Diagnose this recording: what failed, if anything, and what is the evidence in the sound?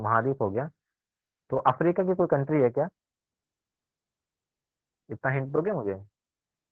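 Nothing failed: no stage of the chain leaves an audible defect anywhere in the speech.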